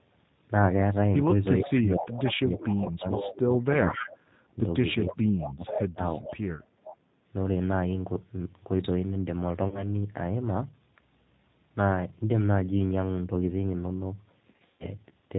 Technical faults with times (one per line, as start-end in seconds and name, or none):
0.00-15.38 G.729 codec
1.62-6.02 speech suppressed in double talk
1.68-3.32 echo leak
5.07-6.96 echo leak
9.68-9.88 VoIP packet loss concealed by the speech codec
14.52-14.86 VoIP packet loss concealed by the speech codec